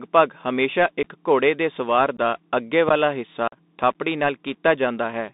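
The speech is boxed into a narrow telephone-like band throughout, roughly 200 Hz to 3.7 kHz, with a granular hiss under it, scratchy s sounds and harsh distortion on loud, bright syllables. This is the Bluetooth CVSD headset codec, and the sound fits a 64 kbps CVSD link. The codec sends one bit per sample saying only up or down, so when the signal moves faster than its adaptive step can follow, the waveform smears into grit and overload, and nothing above about 4 kHz survives.

At 1.03 s and again at 2.17 s the speech drops out for about 15 ms, leaving a tiny hole with hard edges. This is unconcealed Bluetooth headset packet loss. A couple of short voice packets between headset and phone never arrived, and silence or an idle pattern filled the gap with no attempt to hide it. On this CVSD link the speech also returns briefly quieter after each hole.

From 2.89 s to 2.97 s a low, dull thump pushes through, dying away within about 18 ms. 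This is a phantom power thump, where a supply switched on or off on a live input sends a sudden voltage step through the coupling capacitors and appears as a bass pulse.

From 3.48 s to 3.57 s a longer gap of about 45 ms chops the speech. This is the same unconcealed packet loss, with a run of several consecutive packets missing.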